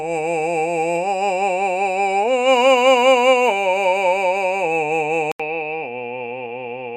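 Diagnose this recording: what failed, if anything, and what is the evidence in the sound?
Input switched to a poorer device at 5.32 s, likely at driver level: after an 80 ms gap the music stops above 5 kHz, slightly quieter and faintly hissy.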